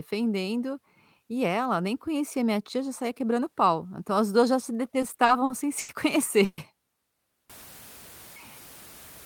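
From 5.01 to 5.91 s, just after "as duas já se", packets arrived late again and again, so the jitter buffer kept running dry. This repeated stalls (stutter) inserts seven short concealed gaps, totalling 190 ms and none longer than 90 ms, making the speech drag and hiccup.

At 6.45 s packets were likely held up in transit, producing a call audio freeze. The receiver stretches the last sound for about 130 ms, then speech resumes, with nothing lost.

From 7.50 s to the end, the signal was likely truncated to about 7 bits without dither. This low bit depth without dither leaves grainy distortion, roughly 20 dB below the speech, that tracks the level and roughens quieter passages.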